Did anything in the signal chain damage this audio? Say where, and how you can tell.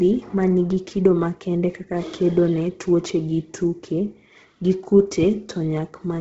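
Yes. Bluetooth LC3 compression throughout, at the codec stage: the speech stops at 7.8 kHz, with grainy, noise-filled highs that point to heavy low-bitrate coding, likely LC3.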